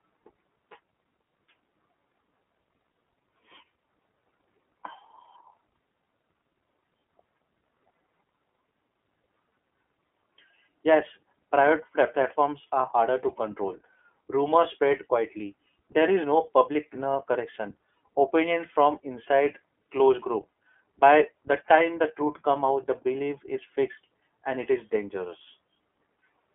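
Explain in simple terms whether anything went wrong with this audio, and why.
The speech has been squeezed through the iLBC codec, a phone-call codec, for the whole clip. It keeps only the middle of the sound, so it's thin and muffled, and each 30 ms chunk is rebuilt separately, which gives the voice a plainly rough, slightly robotic edge.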